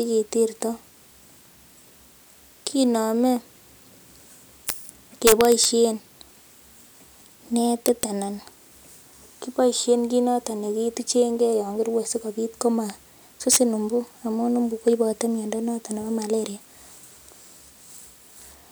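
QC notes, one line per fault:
4.69 s, 5.27–5.65 s, 7.86–8.03 s, 13.52–13.57 s: integer overflow. Peaks exceed the integer limit and wrap to the opposite sign instead of being held. The waveform jumps across the full range. Harsh cracks result, sharpest at 4.69 s (about 10 dB over).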